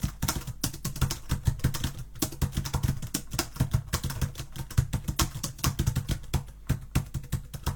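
Listening through the music, nothing stood out as a technical fault at any point.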